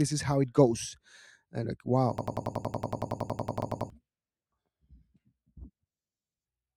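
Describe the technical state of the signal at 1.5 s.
At 1.5 s the speech signal is intact, with no fault audible at that moment.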